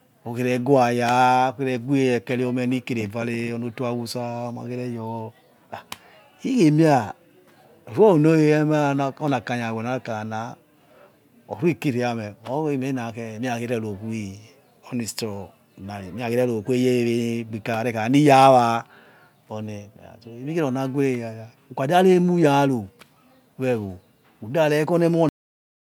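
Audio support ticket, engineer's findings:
Cut-off end at 25.29 s: speech stops mid-sound, flat digital silence to end, no decay. Final buffers never written. Waveform drops abruptly to silence; spectrogram blank after vertical edge.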